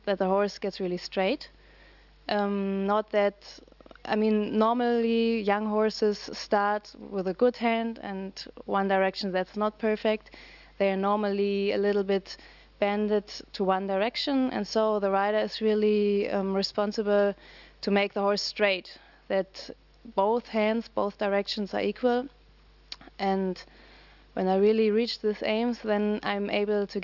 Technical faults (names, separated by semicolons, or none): none